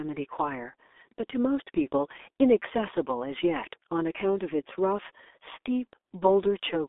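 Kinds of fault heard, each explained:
G.723.1 codec: The speech sounds muffled, boxy and hoarse, with consonants smeared together, and nothing is heard above about 3.7 kHz, so sibilants lose their hiss. The band also thins below about 300 Hz, giving a telephone tone. This points to a very low-rate telephony coder, around 6 kbit/s, that models the voice in 30 ms frames and updates that model too slowly to follow fast articulation, causing heavy damage throughout.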